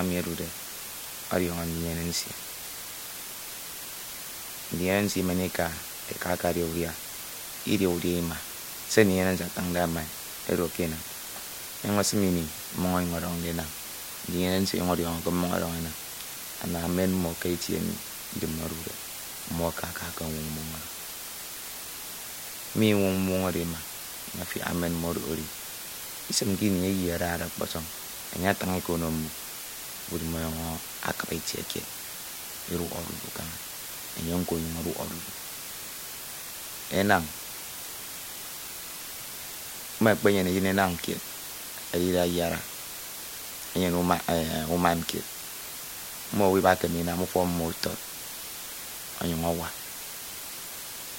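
From start to finish the speech carries low bit depth with dither. The sound fits roughly 6-bit resolution, with dither turning rounding error into a constant, even hiss about 10 dB below the speech. A spectrogram shows a flat noise floor across every frequency, and the waveform never falls silent between phrases.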